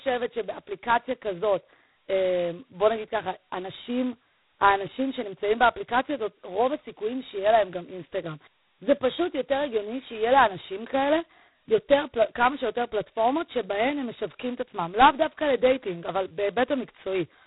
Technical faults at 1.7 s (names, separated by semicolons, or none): G.726 ADPCM